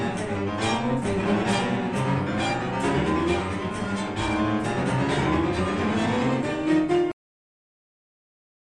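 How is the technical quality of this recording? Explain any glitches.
The recording has one clear fault, a cut-off end. At 7.12 s the sound stops abruptly in the middle of an event and stays silent for the last 1.5 s. The final stretch of audio was never written out or played, so nothing decays. On a waveform the trace drops straight to a flat line at 7.12 s. A spectrogram shows every frequency band ending on the same vertical edge, followed by empty blankness.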